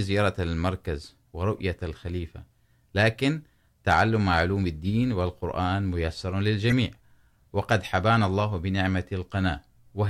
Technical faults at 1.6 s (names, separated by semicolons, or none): corrupt frame decoded